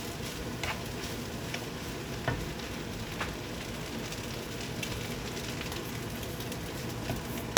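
At 1.61 to 1.64 s the sound skips forward and is briefly disrupted for about 30 ms. The likely cause is a broken MP3 bit reservoir: after frames were lost, the next frame drew its borrowed data from the wrong bytes. The 30 ms span fits a single frame of about 26 ms.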